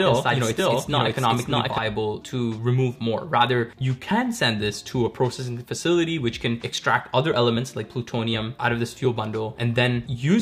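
From the very start until 1.78 s, everything is heard twice: a second copy at roughly equal loudness trails about 0.7 s behind, dry and full-band, then drops out abruptly. This doubled audio track likely comes from the same signal being mixed in again through a slower path.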